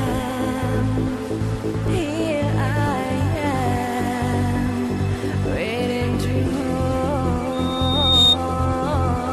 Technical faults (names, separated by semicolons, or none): CD scratch ticks; loudspeaker feedback squeal